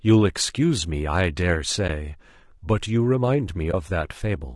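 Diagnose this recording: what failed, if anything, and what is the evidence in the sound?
At the codec stage, the speech is rough and grainy all the way through, with noise filling the gaps between harmonics and a thin, synthetic top end. That's likely low-delay AAC compression, whose short frames blur pitch detail; the damage fits roughly 32 kbps.

Further along, probably at the network, there's AAC frame loss with muting: brief dips at 1.87 to 1.90 s and 3.71 to 3.74 s, each about 20 ms, fitting one lost frame apiece. The decoder zeroed the missing spectrum, and the overlapping windows fade the sound out and in around each gap.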